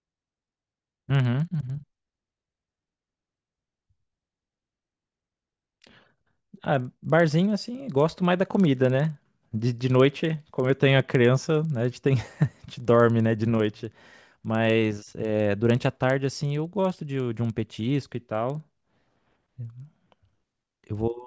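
Speech runs through a resampler restarted on every block, converting 48 kHz to 16 kHz in 50 ms chunks. Each block edge gets a small error, producing a steady 20 Hz tick-buzz. Unlike hum or underrun dropouts, it stops when speech pauses and never leaves gaps.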